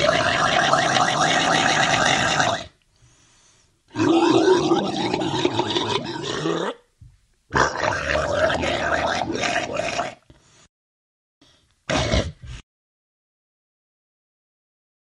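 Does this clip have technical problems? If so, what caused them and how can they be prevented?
No, the audio signal shows no technical problems, so there is nothing here that needs preventing.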